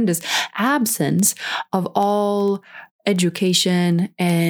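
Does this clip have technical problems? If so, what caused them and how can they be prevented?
Yes. Word clock ticks run from 0.14 s to 4.45 s, about fifty ticks spaced roughly 70 ms apart, through the speech. The receiving device was running on its own clock instead of locking to the sender's, with a mismatch on the order of a few hundred ppm, so at each slip a single sample was dropped or repeated. A spectrogram shows evenly spaced thin vertical broadband lines, and a zoomed waveform shows a small step at each one. Prevention: slave the receiver to the incoming digital clock or to a shared word clock.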